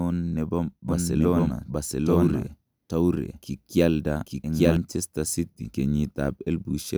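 Speech, with a doubled audio track from 0.89 s to 4.77 s. A second full-band copy of the speech runs about a second behind the original at much the same level, with no decay or added room sound, and it starts and stops abruptly. The likely cause is a slower second capture path or an out-of-step edit. On a spectrogram the same harmonic and formant patterns repeat, shifted right by roughly a second, and the waveform shows overlapping envelopes.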